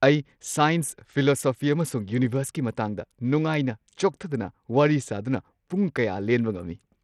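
From start to finish the speech has a gritty, grainy edge, with the treble thinning out and flickering rather than holding steady. That's likely Bluetooth SBC compression starved of bits, which fits a bitrate around 80 kbps, leaving the top sub-bands empty and the rest coarsely quantised.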